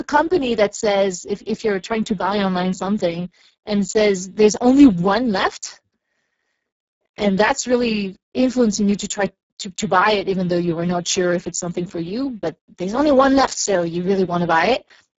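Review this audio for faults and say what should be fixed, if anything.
Hoarse, noisy speech runs through the whole recording, and nothing is heard above 7.7 kHz. This is heavy Speex codec damage. The CELP coder has too few bits to rebuild the excitation, so voicing turns rough and synthetic. The top band is only a shaped noise-like fill rather than real detail. The degree of damage fits a very low setting of about 6 kbps. To prevent it, record or transmit at a higher Speex quality setting, or use a modern codec such as Opus.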